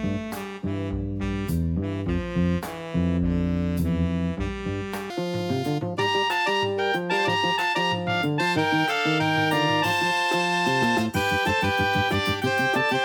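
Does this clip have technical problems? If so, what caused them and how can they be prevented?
Yes. From 5.10 s to the end, a section at the wrong speed plays 1.79 times too fast, lifting pitch about ten semitones; it was likely fitted to the wrong clock. A spectrogram shows harmonics jumping upward and events squeezed closer together. Matching sample rates and clock settings between editor and player prevents this.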